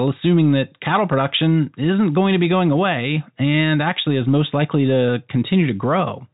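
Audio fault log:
There is no fault in this audio.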